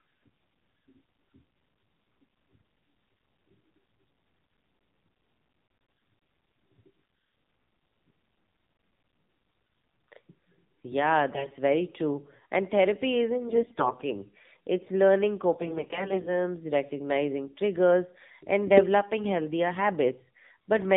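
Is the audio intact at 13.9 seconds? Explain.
No. Between 13.48 and 14.08 s, after "therapy isn't" and before "it's learning", AMR bit errors corrupt roughly a tenth of the weakly protected bits, misplacing excitation pulses, so the voice turns hoarse, scratchy and gargly. Throughout, the AMR narrowband mobile codec, at a low rate that fits about 7.4 kbps, cuts everything above 4 kHz and leaves a buzzy, synthetic tone.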